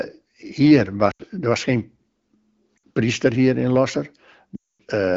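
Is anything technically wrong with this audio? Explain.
Yes. Lost AMR speech frames occur at 1.11 to 1.22 s, just before "er was geen", at 2.78 to 2.81 s, before "priester hier in", and at 4.55 to 4.82 s. Corrupted frames failed their checksum, so the wideband decoder stretched the last good pitch and vocal-tract settings with falling gain. The two shorter gaps, about 80 and 60 ms, drop to near silence within two frames. The 240 ms run also drops to near silence within two frames, and the sound returns weak or rough for a moment.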